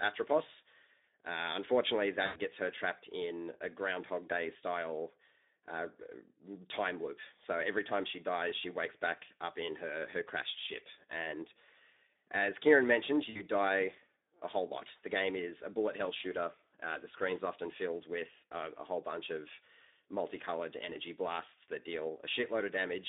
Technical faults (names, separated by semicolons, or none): Speex codec; VoIP packet loss concealed by the speech codec